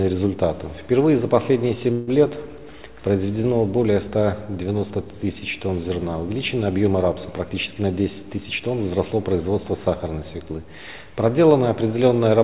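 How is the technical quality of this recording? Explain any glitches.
The recording has two timing glitches. It also passes through a narrowband call path, with nothing above 4 kHz, which points to a G.711-style telephone codec.

Call audio freeze, 1.92 to 2.09 s: the sound stalls and is extended as a fading buzz or hiss for about 151 ms, then resumes where it stopped with nothing lost. The likely cause is delayed packets draining the jitter buffer. On a spectrogram it looks like a smeared, decaying band.

Jitter buffer speed-up, 7.43 to 8.68 s: the audio plays about 12% fast at unchanged pitch and sounds hurried. The receiver trimmed roughly 150 ms in short pitch-period slices to shed excess buffered delay. The waveform shows cycles of unchanged length with no visible gaps.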